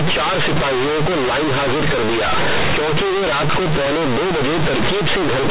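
From start to finish, the speech is hit by companded audio read as linear: mu-law bytes are played as plain 8-bit samples without expansion. Quiet passages swing as hard as loud ones, giving loud, buzzy distortion and heavy noise in pauses. Clipping, by contrast, stays quiet in silences. The underlying G.711 coding is sound, and its 4 kHz telephone band can still be heard.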